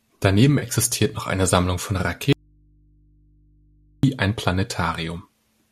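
At 0.59 to 0.64 s, just before "noch eine", AAC frame loss with concealment leaves a brief smeared, phasey patch. About 30 ms was filled in by the decoder, which fits three lost frames.

From 2.33 to 4.03 s the speech cuts out abruptly for 1.7 s. This is an audio dropout to a faint residue, likely from the signal path. Only mains hum remains, about 35 dB down.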